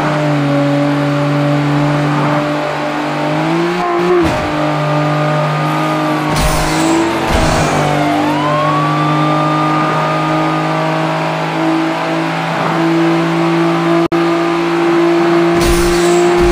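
At 14.06 s a gap at a join of encoded pieces opens: about 56 ms of silence, ending at 14.12 s, cut into sound that was running continuously. Two separately encoded segments were butted together without trimming, so the encoder's start-up delay and the padded final frame both remain as dead air. Its edges are smeared by the codec, and the sound resumes exactly where it stopped. That seamless continuation separates it from a dropout, where material goes missing.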